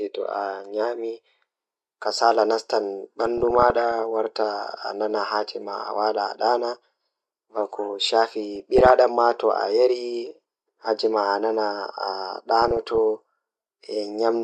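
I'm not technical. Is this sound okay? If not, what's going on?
No. Three short stretches of DAB burbling occur, at 3.26 to 3.92 s, 8.55 to 8.91 s, and 12.62 to 12.98 s. Weak digital radio reception let corrupted data through, so slices of the audio briefly jump in level, producing short blips of noise over the speech.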